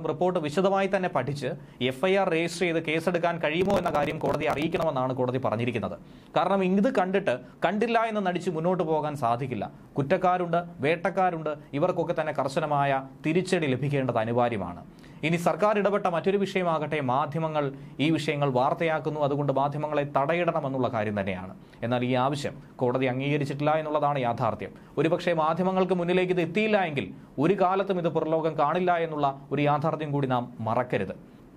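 From 3.61 to 4.83 s, processor overload crackle: the processor misses dozens of few-millisecond buffer deadlines, each skipped, leaving hard-edged gaps heard as gritty crackle.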